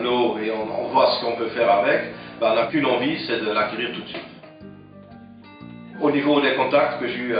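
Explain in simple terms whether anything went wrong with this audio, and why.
Nothing went wrong here: the signal holds steady the whole way, with no dropouts, glitches or other technical trouble to be heard.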